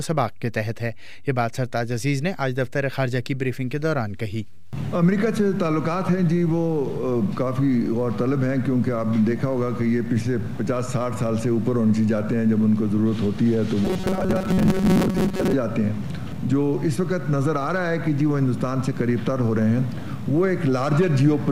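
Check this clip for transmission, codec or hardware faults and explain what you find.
One fault stands out: robotic sound from repeated short buffers, from 13.85 to 15.53 s. The likely cause is new audio arriving too seldom, so playback filled the gaps by looping a short, roughly 5.3 ms slice of the last buffer while the real audio was skipped. For most of that stretch the repeats impose a fixed 188 Hz buzz, turning the sound into a rigid, metallic buzz that only loosely tracks the original.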